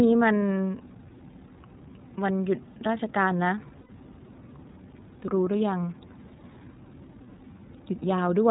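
A speech recording that sounds muffled and dull throughout, with nothing above 4 kHz, and a plainly rough, slightly synthetic texture. This is the iLBC codec: it band-limits the audio to narrowband and rebuilds each frame's excitation independently, with a quality that fits its 13.33 kbps, 30 ms frame mode. From 3.80 to 3.90 s the sound turns into a brief held, buzzy vowel-like tone before clear speech snaps back. These are lost iLBC frames: the decoder repeated the last pitch cycle mixed with noise to cover the 90 ms gap, which fits three lost 30 ms frames. Because each frame stands alone, recovery is almost immediate.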